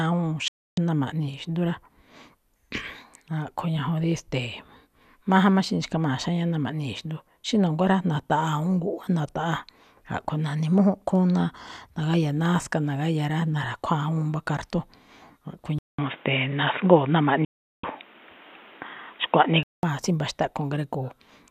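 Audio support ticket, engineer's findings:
Digital broadcast dropout, 0.48 to 0.78 s and 17.45 to 17.84 s: sound mutes after a 3 ms fade, 288 and 384 ms lost, consistent with about 12 and 16 corrupt frames.

Input switched to a poorer device, 15.79 to 19.83 s: 200 ms silence, then bandwidth capped at 3.8 kHz, level shift around 5 dB, new noise floor; likely headset or call-profile mic.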